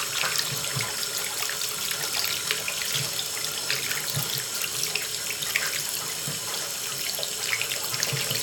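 No technical faults can be heard anywhere in the audio.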